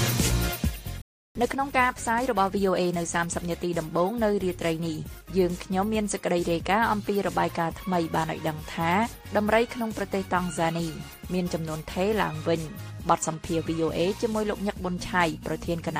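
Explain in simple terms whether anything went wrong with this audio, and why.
Something did go wrong. At 1.02 s the sound cuts out and stays silent until 1.35 s, a gap of about a third of a second. This is a playback stall. The player likely ran short of data or was briefly blocked, so it had nothing to send out.

Once the sound resumes at 1.35 s, the player hurries to make up the lost time. Until 3.57 s it runs about 1.15 times faster at unchanged pitch. This is time-compressed catch-up: tiny slices are dropped and the joins are blended.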